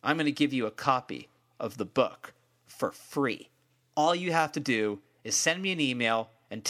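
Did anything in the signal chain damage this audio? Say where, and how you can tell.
Yes: from 3.30 to 4.31 s, after "of the book for", speed rises 5.4% and pitch 91 cents, then snaps back before "have to do is", likely a buffer drift correction step.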